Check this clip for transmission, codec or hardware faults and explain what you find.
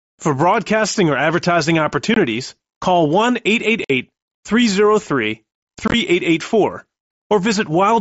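One fault is present: unconcealed Bluetooth headset packet loss. Headset voice packets went missing at 2.14–2.17 s (after "broadcasting or advertising"), 3.84–3.90 s and 5.88–5.94 s, and silence or an idle pattern replaced them uncorrected. Each leaves an abrupt hole of about 25–50 ms; the last is a chopped cluster with gaps up to 22.5 ms.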